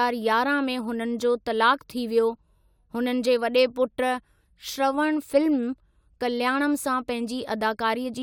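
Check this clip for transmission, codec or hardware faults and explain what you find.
No faults turn up anywhere in the clip.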